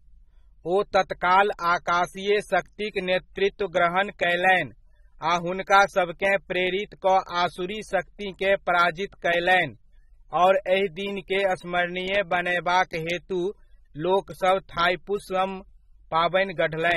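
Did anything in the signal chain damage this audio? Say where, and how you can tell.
Yes: AAC compression throughout, at the codec stage. The speech sounds dull, smeared and fizzy on sibilants, likely from AAC-LC quantising coarsely at around 27 kbps.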